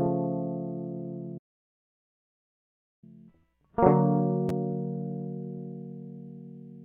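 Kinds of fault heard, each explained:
Playback stall: from 1.37 s to 3.04 s the music cuts out mid-flow and the output falls silent for about 1.65 s before it resumes. The gap is too long and too clean to be a dropout or a click. It sounds like the player had nothing to send to the output for that stretch, most likely because its buffer ran dry or its playback thread was held up, until it recovered and carried on.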